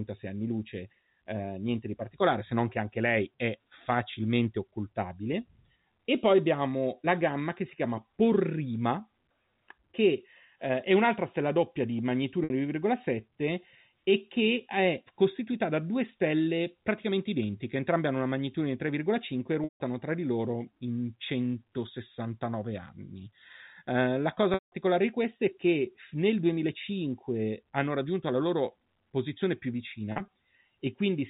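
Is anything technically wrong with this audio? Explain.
Yes. Packet loss with pitch repetition occurs four times. The receiver lost stretches of the stream and filled each gap by repeating the last pitch period, fading it out.

At 12.44 s, after "un'altra stella doppia di", 60 ms went missing, heard as a briefly held, buzzy tone. At 19.64 s (160 ms) and 24.54 s (180 ms), between "la cosa" and "di queste è che", the repetition fades to silence before the speech cross-fades back. At 30.12 s, after "la loro posizione più", 80 ms of losses are spread over 160 ms, none longer than 40 ms, giving brief held, buzzy notes. The telephone-band G.711 coding cuts everything above 4 kHz.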